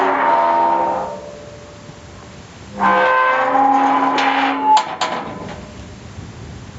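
A recording of everyday sounds in which loud and soft parts are squashed toward one level throughout. This is gain pumping, likely from input gain set far too high and a fast limiter pulling it down on every peak, with swings of around 20 dB. The audio also stops at 8 kHz, consistent with a call codec's bandwidth limit.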